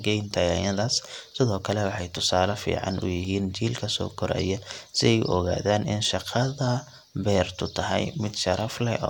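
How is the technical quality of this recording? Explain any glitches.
No glitches can be heard; the speech signal stays continuous and stable throughout, with nothing in it that points to a technical problem.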